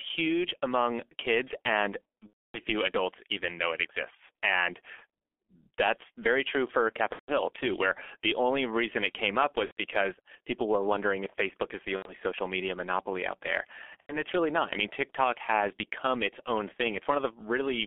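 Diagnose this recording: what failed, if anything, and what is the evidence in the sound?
The codec stage is the first failure. The whole recording passes through G.723.1 at 6.3 kbit/s, and the damage is heavy. Energy is confined to roughly 250 Hz to 3.5 kHz, so the speech sounds muffled and hoarse, with smeared consonants. On a spectrogram there is a hard ceiling at 3.5 kHz and blurred fricatives. The slow, 30 ms frame-based model also flattens fast spectral changes into blocky steps.

The network stage failed too: VoIP packet loss was concealed by the speech codec at five points. These are 2.27–2.60 s, 7.13–7.31 s (after "that's very true for", before "too where the only"), 9.65–9.77 s, 11.96–12.14 s (between "is the" and "social media monopoly out") and 14.00–14.23 s (after "media monopoly out there", before "really not I mean"). The gaps last 270, 150, 120, 90 and 90 ms, which fits whole 30 ms frames. 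Over each gap, the decoder repeats its last pitch and filter, so a buzzy tone or coloured noise fades away. On a spectrogram this shows as a frozen, smeared stretch. On the waveform it shows as a decaying envelope. The speech stays weak briefly after each gap.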